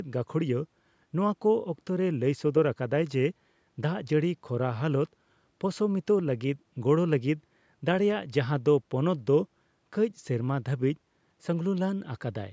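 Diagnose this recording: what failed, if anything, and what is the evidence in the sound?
Nothing failed in this recording.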